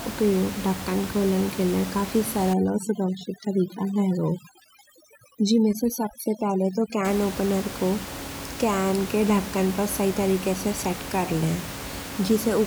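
From 2.53 s to 7.05 s the speech shows overdone noise removal. The noise reduction is set too aggressively, so any frequency band sitting near its noise estimate gets pulled almost to nothing, taking the quieter parts of the voice along with it. The steady room noise, about 11 dB below the speech elsewhere, collapses here into near silence scattered with twinkling specks.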